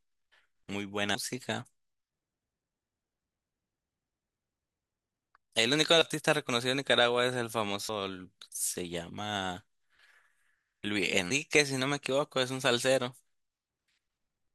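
The speech jumps ahead at 1.15, 6.02, 7.89 and 11.31 s. These are compressed frames skipped. Whole 85.3 ms blocks never play. The first gap loses about a third of a second, the last about 150 ms, and the others about a tenth.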